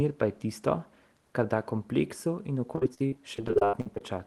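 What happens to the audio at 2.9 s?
At 2.9 s the speech is inside a stretch of repeated packet loss (robotic sound) running from 2.75 to 4.01 s. Short gaps of up to 79 ms recur throughout, each bridged by extending the previous sound, so about a third of the span is concealed and comes out choppy and robotic.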